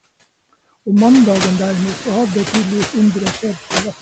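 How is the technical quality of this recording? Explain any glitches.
Quality is held back by noise suppressor artifacts throughout. The suppressor pulls steady noise down by about 20 dB, frame by frame, so the background dips between words and swells beneath them. That's most noticeable once the room noise climbs by about 14 dB, from roughly 1 s on. Nothing reaches past 8 kHz, which fits a band-limited call codec.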